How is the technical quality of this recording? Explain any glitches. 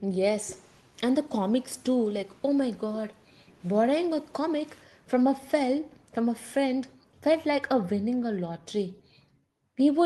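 The recording is affected by a timing fault typical of a call link, with the receiver repeatedly adjusting playback to cope with a mismatched sender clock.

Clock drift between sender and receiver runs throughout: the sender's clock appears roughly 3% slow, so the jitter buffer keeps draining and the receiver must stretch playback to compensate.

Repeated timing corrections run from 0.12 s to 9.81 s. The receiver inserts small repeated pieces at uneven intervals, slowing delivery to about 97% speed and adding roughly 300 ms overall. These are heard, if at all, as faint hiccups or a slightly unsteady tempo. The band-limited call sound, topping out near 12 kHz, fits an Opus codec path at around 24 kbps.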